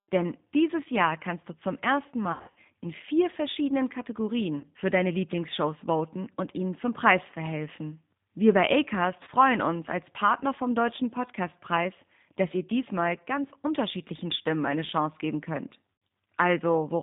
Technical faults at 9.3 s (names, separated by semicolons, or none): G.729 codec; VoIP packet loss concealed by the speech codec